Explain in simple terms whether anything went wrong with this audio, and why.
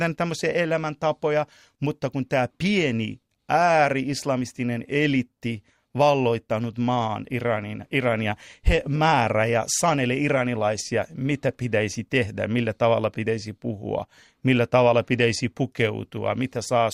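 Nothing went wrong; the speech sounds as it should.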